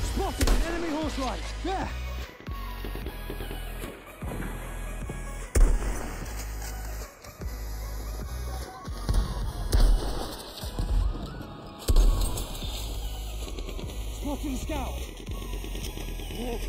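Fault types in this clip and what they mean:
Channels drifting apart: The left and right channels run from separate clocks that disagree by roughly 20 parts per million. The gap between them grows slowly across the clip and reaches a fraction of a millisecond by the end. Summed to mono, the two copies partly cancel at evenly spaced frequencies. Those notches sweep steadily through the spectrum as the gap widens, giving a slow, hollow flanging.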